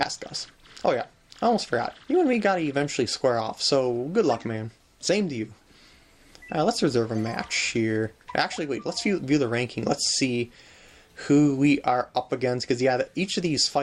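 No faults can be heard anywhere in the clip. Nothing in the audio breaks up, drops out or distorts at any point.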